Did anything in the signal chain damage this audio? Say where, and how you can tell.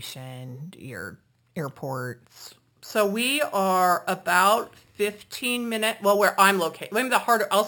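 Yes. The damage sits at a sample-rate conversion stage, and it lasts through the whole speech clip. The fault is imaging from sample-and-hold upsampling. A bright metallic fizz rides on the speech from 6 to 12 kHz, about 15 dB below the voice. It swells and fades with the speech. That band mirrors the real spectrum, so its pitch moves against the voice's. This fits 12 kHz audio raised to 48 kHz by repeating samples with no smoothing filter.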